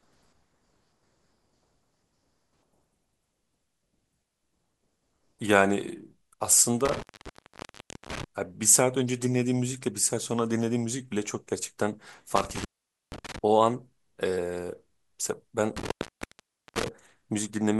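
Speech clip with an intermittent contact, a loose connection briefly opening, at 6.85–8.24 s, 12.36–13.39 s and 15.77–16.88 s, cutting sound for about 1.09 s, 0.48 s and 0.87 s. Each shows as a waveform gap flanked by crackle spikes and a near-blank spectrogram band edged with broadband vertical clicks.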